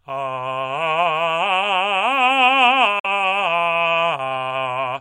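A Bluetooth dropout at 2.99 to 3.06 s briefly silences this music. The sound cuts to nothing for about 65 ms and then resumes further along, as if it had kept playing. That is likely audio packets reaching the headphones too late and being discarded, which fits about two lost frames.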